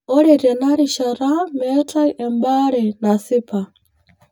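From start to finish the speech sounds hollow and phasey, as if heard through a tube, with a thin, slightly metallic colour that never shifts. That is channel delay, or comb filtering: one channel arrives around 10 ms behind the other, and when the two are summed to mono, the shared content cancels at regularly spaced frequencies. The notches begin near 50 Hz and repeat roughly every 100 Hz, carving fixed gaps through the voice's spectrum.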